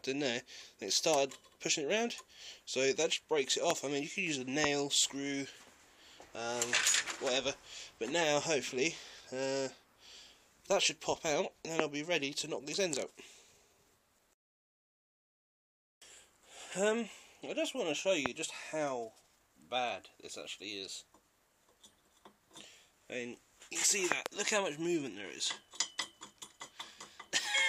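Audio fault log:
3.70, 4.64, 11.8, 18.26 and 24.12–24.28 s: loud pops, sharp spikes about 20 to 25 dB above the sound, with a quick double at 24.1 s. Likely a voltage glitch such as a switch, plug or static discharge.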